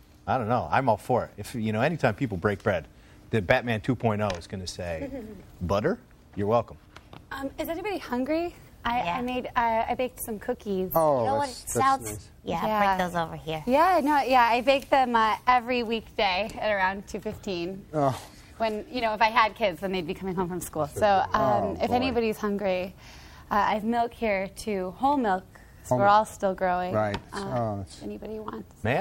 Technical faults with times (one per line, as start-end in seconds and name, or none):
none